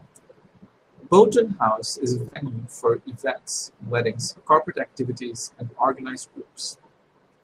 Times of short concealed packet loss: 2.25-2.37

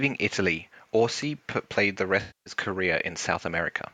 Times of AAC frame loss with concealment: 2.20-2.53

